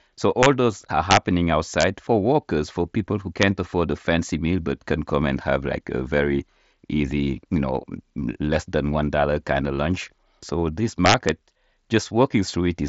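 Integer overflow: loud peaks exceed the largest integer and wrap to the opposite sign instead of being limited, producing violent cracks sharper than clipping at 0.43–0.46 s before "those are", 1.11–1.17 s after "those are", 1.81–1.83 s before "for workers for people", 3.42 s, and 11.06–11.29 s. Overdrive is about 1 to 4 dB. The mSBC headset codec path leaves nothing above 7.7 kHz.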